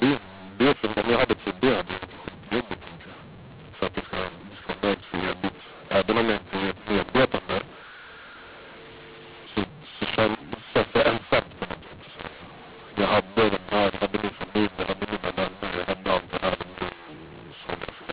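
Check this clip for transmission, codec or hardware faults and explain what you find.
One fault runs through the whole clip. The speech sounds harsh and gritty, and the pauses fill with hiss. This comes from a mu-law and A-law mix-up: audio coded as A-law is decoded as mu-law, which scrambles every sample level.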